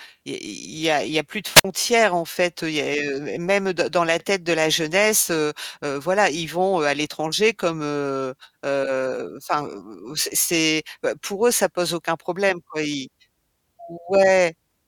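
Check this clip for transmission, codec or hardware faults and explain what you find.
There's one fault in this speech clip. From 1.54 to 1.65 s, between "y a plus de" and "en fait", there's a wireless microphone squelch dropout. The radio link fades, hiss swells, and the receiver's squelch mutes roughly 52 ms before the signal returns.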